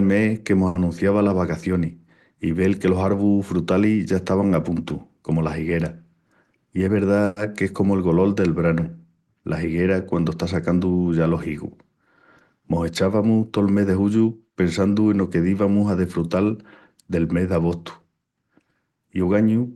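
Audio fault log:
0.67–0.77 s, short stall from a late packet: just after "mes que mos" the last sound is drawn out for about 80 ms while a delayed packet is awaited. The receiver repeats and stretches what it already had, so nothing is lost, but a sound lingers too long with a faint buzz or small dip in level. On a spectrogram the harmonics run on as flat, smeared horizontal bands; the waveform shows repeating near-identical cycles with slightly lowered amplitude before normal motion resumes.
6.50–7.05 s, jitter buffer speed-up: following "comu las higueras" the audio runs about 15% fast at unchanged pitch, roughly a tenth of a second being trimmed away across the stretch. With surplus audio queued, the receiver cut out short chunks of a pitch period or a few, again and again, to pull the delay back down. It sounds hurried and slightly clipped in rhythm. On a spectrogram syllables look compressed in time with harmonic spacing intact; the waveform shows tiny seams where periods were spliced out.
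7.25–7.38 s, call audio freeze: just before "ques comu el golol" the sound halts and is bridged for about 110 ms by a fading continuation of the last sound, then picks up where it left off with nothing skipped. Most likely, packets stalled in transit and the buffer ran dry, leaving the receiver to synthesise filler. On a spectrogram this appears as a blurred, decaying patch of the prior spectrum with softened harmonics; the waveform shows a smooth taper in amplitude but no true silence.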